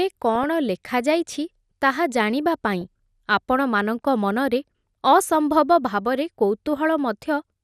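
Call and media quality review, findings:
Speech dull throughout, upper range missing, gurgling granular texture. Likely MP2 compression at a low rate, fitting about 80 kbps: upper sub-bands dropped, remaining bands coarsely quantised. Unlike burbling, it is constant, not bursty.

DAB burbling: short bursts at 0.35–0.46 s, at 2.81 s between "ଜାଣିବା ପାଇଁ" and "ଆପଣମାନଙ୍କ ମନରେ", and at 5.19–5.30 s after "ଜାଣିବା ପାଇଁ ଆପଣମାନଙ୍କ ମନରେ". Residual bit errors in the MP2 stream throw single sub-bands off level briefly, not the steady dullness of compression.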